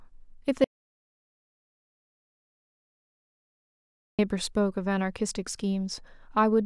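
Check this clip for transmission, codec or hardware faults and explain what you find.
One fault stands out in this speech clip. An audio dropout to silence runs from 0.64 s to 4.19 s, about 3.5 s of lost sound. The input likely disappeared while recording continued writing silence, so speech stops abruptly, leaving total silence without room tone, then resumes mid-flow.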